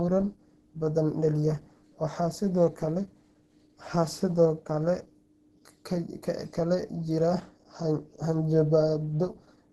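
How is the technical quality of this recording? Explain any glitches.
Codec damage throughout limits the quality. From start to finish there is plainly audible Opus compression. Nothing remains above 12.1 kHz, and the speech sounds hoarse and somewhat muffled. That fits a low rate around 16 kbps, likely pushing the encoder into its hybrid speech mode. Grainy roughness rather than MP3-style swirling marks it as Opus.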